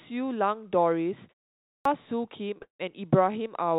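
At 1.61 s, after a pause of about 0.36 s, the speech resumes with a clipped start after a pause. Roughly the first quarter second of sound, about 0.24 s, is missing, so the speech comes in abruptly out of silence, already mid-onset. The output device appears to have dropped into a low-power state during the gap and needed that time to wake and resume playback, discarding whatever arrived before it was ready. The restored audio runs from 1.85 s onward.

From 2.58 to 2.62 s there is a short stall from a late packet. A packet was not in the jitter buffer when its playout time came, so the receiver held the last sound for 24 ms until the data turned up, then continued from the same point. Nothing is lost, but that fragment is drawn out, and the stream now runs 24 ms later than before.

Immediately after, from 2.62 to 2.81 s, comes a call audio freeze, likely caused by packets being held up in transit and the jitter buffer running dry again. 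The receiver spends 170 ms filling the gap: a brief decaying extension of the last sound, then about 130 ms of silence, before playback picks up exactly where it stopped. No content is missing, but a hard hole is inserted into the flow. Throughout, the band stops at 4 kHz, consistent with a 64 kbps G.711 telephone codec.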